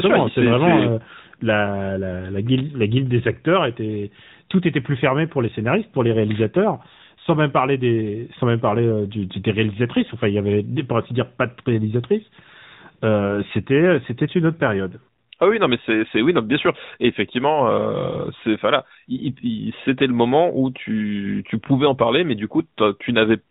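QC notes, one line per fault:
Throughout, AMR narrowband mobile codec: vocal-tract modelling leaves speech buzzy and synthetic with nothing above 4 kHz, pointing to a 10.2 kbps mode rather than simple low-pass filtering.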